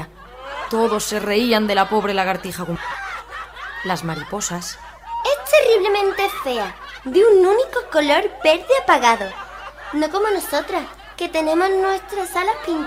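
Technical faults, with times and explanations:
2.75 to 2.77 s, skip ahead: about 0.7 s of audio is missing, and playback jumps straight to later material with no filled gap. The waveform shows an abrupt splice, and on a spectrogram the harmonic patterns break discontinuously at one vertical seam.
3.00 to 6.02 s, jitter buffer speed-up: the receiver trimmed many short pitch-period pieces, around 150 ms in total, so the audio runs at 105% speed with unchanged pitch and sounds hurried. The spectrogram shows the same harmonic spacing over compressed timing, and the waveform shows tiny repeated splices.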